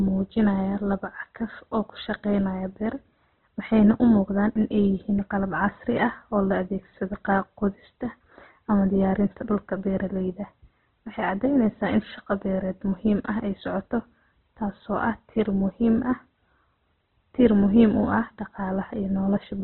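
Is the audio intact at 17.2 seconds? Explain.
No. At 17.2 s, as across the whole clip, the speech carries heavy damage that fits Opus compression at a very low bitrate in its CELT music mode, likely around 12 kbps. Starved bands are refilled with folded or noisy content, so the sound turns grainy and rough. A spectrogram shows nothing above 4.1 kHz.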